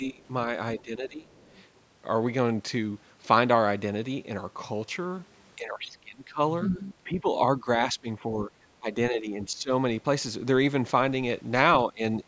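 Speech suppressed in double talk opens the clip at 0.00 to 0.22 s and returns at 0.79 to 1.31 s. The talker's level sinks by about 20 dB, then about 15 dB. This is likely an echo canceller that could not separate near speech from loudspeaker echo while both sides spoke, and so attenuated everything.

Right after, at 1.32 to 1.50 s, the other side's voice leaking through appears as a faint scrap sitting roughly 35 dB below the speech. It likely comes from loudspeaker output that the echo canceller failed to fully remove from the microphone signal.

The same double-talk suppression recurs at 5.56 to 7.26 s, 7.58 to 9.70 s and 11.86 to 12.28 s. The talker dips by about 15 dB in the middle stretches and about 20 dB at the end, sounding ducked and patchy for about 1.5 s, 1 s and 0.2 s in total.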